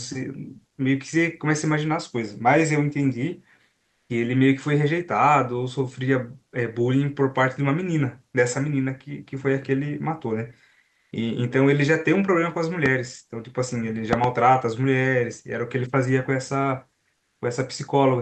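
This speech clip comes through a call path whose Opus coding trims the sound above about 8 kHz. Three times, comfort noise replaces the background: 3.77 to 4.09 s, 10.89 to 11.11 s, and 17.17 to 17.41 s. The real background, about 55 dB below the loud parts, gives way to a flat, featureless hiss. That hiss is about 3 dB quieter in the first gap, about 8 dB louder in the second, and about 2 dB louder in the third. The likely cause is Opus discontinuous transmission. The sender goes quiet in pauses, and the receiver fills them with synthetic noise. Loud pops also cut in. There is a single pop from 12.86 to 12.88 s, peaking roughly 10 dB above the sound. From 14.13 to 14.26 s comes a pair of pops, peaking roughly 15 dB above it. The sound carries on beneath them. These are likely electrical pulses, from a plug, switch, static or driver glitch.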